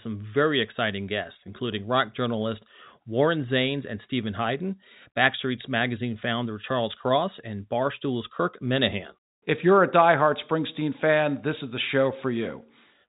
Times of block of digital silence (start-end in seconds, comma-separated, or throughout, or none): none